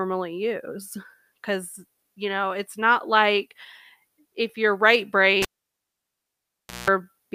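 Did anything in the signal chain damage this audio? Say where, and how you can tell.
Yes, in the analogue wiring: a cable pulled and plugged in just after "if you're right". A pop at 5.42 s, near silence for about 1.43 s, a 185 ms burst of 60 Hz mains buzz while only the tip touched, then another pop as the sound returns at 6.9 s.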